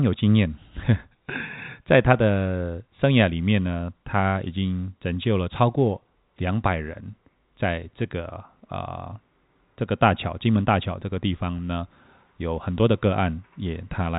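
Nothing stood out on listening to this speech; it carries the narrow telephone sound of G.711 coding, with nothing heard above about 3.8 kHz.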